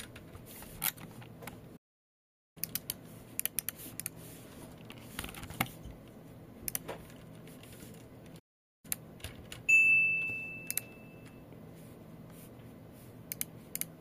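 A playback stall hits at 1.76 s and again at 8.39 s. In the first, the sound cuts out mid-flow for about 0.79 s, resuming at 2.57 s. In the second, it drops out for about 0.45 s, returning at 8.85 s. Each gap is dead silence rather than a fade, most likely because the player ran short of data or its output thread was briefly blocked, leaving nothing to send until it caught up.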